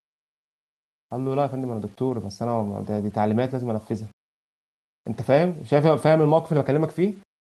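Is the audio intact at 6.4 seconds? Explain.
No. At 6.4 s, as throughout the speech, the audio has low bit depth without dither, likely 8 bits with plain rounding. The error tracks the signal, about 40 dB below it, so quiet stretches sound gritty or sputter. A zoomed waveform shows staircase steps, and a spectrogram shows a grainy broadband floor that rises and falls with the speech.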